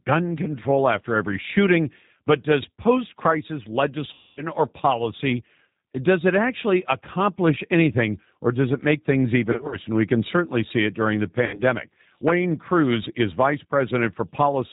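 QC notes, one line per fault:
throughout, G.729 codec: 8 kbit/s model-based coding leaves the speech rough and synthetic, with an empty spectrogram band above 4 kHz.
4.13–4.42 s, 9.52–9.77 s, 11.46–11.61 s, VoIP packet loss concealed by the speech codec: after "does post crisis", "does it make things" and "see it during the", the decoder stretches its last sound into a fading buzzy tone or coloured noise. On a spectrogram this shows as flat, smeared harmonics or noise, and on a waveform as a decaying envelope, choppy at 9.52 s where the short gaps are scattered.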